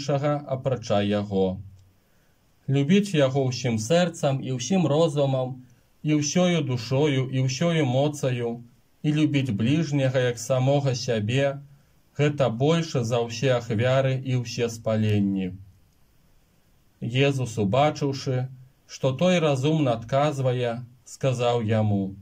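Two drift correction steps are audible. From 3.85 to 5.70 s the sound runs 6% fast and a semitone sharp before snapping back. From 15.45 to 16.09 s it runs 6% slow and slightly over a semitone flat. Each is likely clock-matching software abruptly shifting playback rate to rebalance its buffer.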